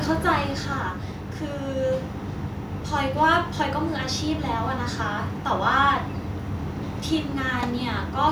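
Speech opens loud and then settles as automatic gain falling pulls the level down between 0.05 and 1.13 s. The gain control judged the incoming signal too hot or its background noise too strong and eased its gain back by about 6 dB over that second, so the background sinks along with the talker. On a waveform the envelope visibly tapers across that span; a spectrogram shows every band, noise floor included, dimming together rather than any single frequency changing.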